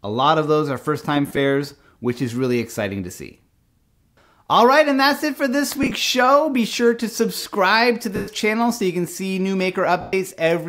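Lost LE Audio frames break the sound at 1.27–1.37 s and 5.83–5.91 s (short scattered gaps), then 8.16–8.28 s and 10.01–10.13 s (120 ms each). The LC3 decoder repeats the last spectrum with random signs, so each gap shows as a noisy smear, fading to silence in the longer ones.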